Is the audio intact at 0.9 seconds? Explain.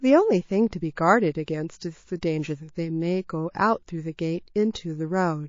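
No, at 0.9 s, as throughout, the speech sounds watery and swirly, likely MP3 compression at a low bitrate near 32 kbps. The swirl comes from weak frequency lines flickering between frames, which a plain low-pass filter wouldn't produce.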